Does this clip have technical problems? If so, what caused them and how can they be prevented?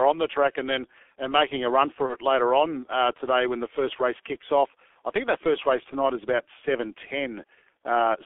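Yes. The whole recording has passed through the G.723.1 codec at about 6.3 kbit/s. Its band runs only from 300 Hz to 3.5 kHz, so the speech sounds muffled and thin. The codec works in 30 ms frames and rebuilds the voice from a coarse model that updates slowly. Damage is heavy here: hoarse tone and smeared consonants. To prevent this, use a wideband codec at a higher bitrate.

At 2.06 to 2.16 s there is VoIP packet loss concealed by the speech codec. The gap fits a single lost 30 ms frame. The decoder filled it by repeating its last pitch and filter settings at falling gain. That gives a brief, fading stretch. Because each frame builds on the one before, the speech stays weak and distorted after the loss, until about 2.16 s. To prevent this, use a steadier network path with a jitter buffer and forward error correction.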